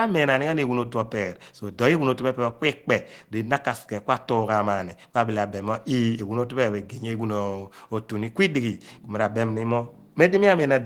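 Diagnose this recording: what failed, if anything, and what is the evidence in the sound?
Nothing failed; no stage shows any audible problem.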